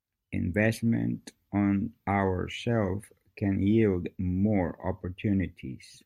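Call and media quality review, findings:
No audible technical defects on the signal path: level, continuity and timing remain stable throughout the speech recording.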